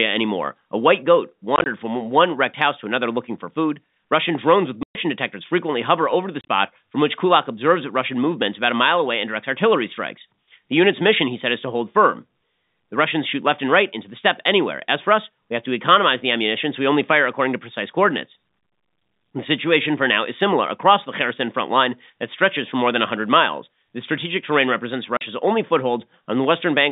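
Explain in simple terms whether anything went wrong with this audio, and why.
Packet loss filled with silence chops the speech at 1.56 s after "white goat", 4.83 s after "drones with", 6.41 s after "frequently hover over the", and at 25.17 s. Each gap falls to dead silence with hard edges. Concealment would instead smear or repeat sound across it.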